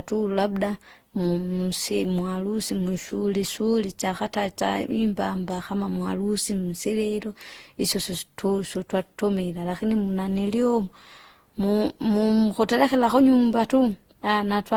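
Speech throughout shows generation loss: a swirly, hollow, smeared texture with blurred consonant attacks, rougher than one pass at a rate that fits 48 kbit/s Opus would give. The likely cause is around seven rounds of decoding and re-encoding, each quantising on a shifted frame grid so noise piles up. Unlike a single low-bitrate encode, the bandwidth stays wide, reaching 20.2 kHz, while the damage sits inside it.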